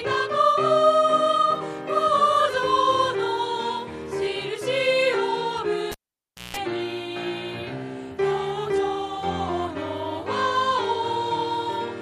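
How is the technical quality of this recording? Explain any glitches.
A single glitch mars the recording. From 5.92 to 6.57 s a cable is pulled and plugged in: a pop, about 600 ms of near silence, then roughly 170 ms of 60 Hz buzz as only the tip connects, and a second pop as the sound returns. That hum and the paired pops set it apart from a plain dropout.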